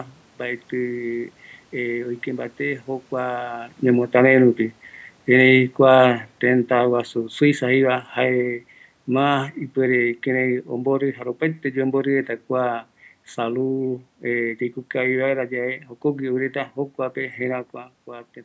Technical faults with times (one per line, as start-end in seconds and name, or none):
3.84-11.05 automatic gain falling